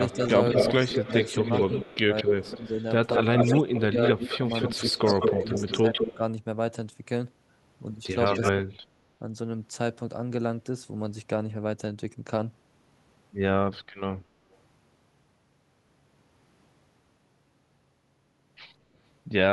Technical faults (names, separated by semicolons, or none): echo leak; speech suppressed in double talk